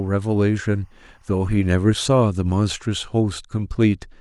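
A faint, steady chirping warble sits behind the speech from 0.0 to 2.0 s, well below it, flipping between pitches near 1 and 2 kHz. This is timecode bleed: linear timecode, which fits 23.976 frame-per-second code, leaking from a neighbouring track or cable.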